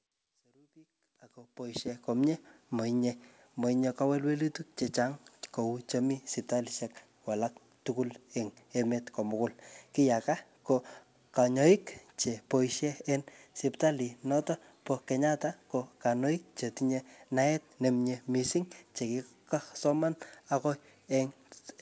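The level rises gently from silence over the first 2.17 s with no click or hard edge, and the signal carries nothing above 8 kHz, with the usual coding texture of a wideband call codec such as G.722, all of it consistent with audio that came through a normal call connection with an editor's fade-in.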